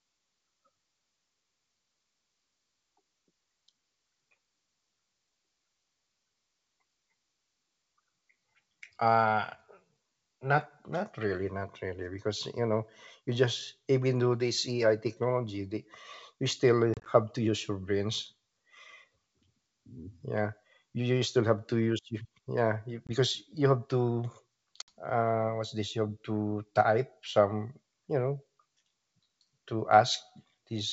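Packet loss on an ADPCM call at 16.94–17.07 s, 23.07–23.10 s and 24.82–24.89 s: hard silent gaps are followed by a brief click or distortion while the decoder's predictor resynchronises with the sender.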